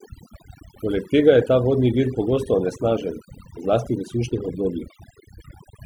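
A speech recording with overdone noise removal running throughout: the processor pulls individual frequency bands down hard whenever they sit near its noise estimate, so low-level parts of the voice are cut along with the noise, leaving near-silent gaps speckled with twinkling artefacts.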